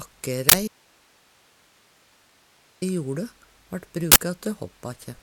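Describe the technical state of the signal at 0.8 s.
At 0.8 s the signal sits inside an audio dropout to a faint residue, running from 0.68 to 2.82 s. The wanted sound cuts off abruptly and only hiss remains, roughly 35 dB down, likely because the source link broke while the downstream path stayed live. Unlike a fade, there's no gradual decay.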